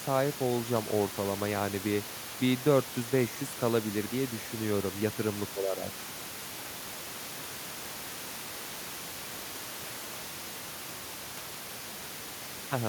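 Nothing goes wrong anywhere in this speech recording, and the bit of room noise you can hear is simply part of the space where the microphone sat, sitting well below the talking.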